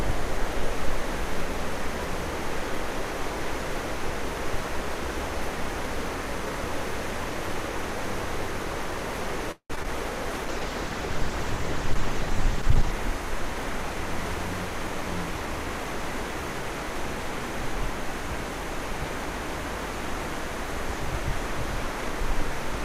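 A recording of everyday sounds, with three distinct network and codec faults. From 9.51 to 9.88 s there is repeated packet loss with a robotic sound: four holes are patched by stretching the preceding audio, the longest about 182 ms, so over half that span is synthetic continuation with small dead gaps between. On a spectrogram this shows as smeared, repeated horizontal bands broken by brief blank slivers. From 10.46 to 12.99 s a call bitrate drop makes the audio coarse, watery and muffled, consistent with the encoder falling from 48 kbps to around 11 kbps. The spectrogram would show the upper band abruptly emptied above a low cut-off, with blotchy, quantised texture below, until full bandwidth returns near 13 s. From 13.08 to 16.63 s a jitter buffer speed-up plays the sound about 4% fast at unchanged pitch, trimming roughly 150 ms in short pitch-period slices so rhythm drifts. In the waveform, repeating cycles are subtly spliced together, and events arrive marginally earlier than their natural spacing.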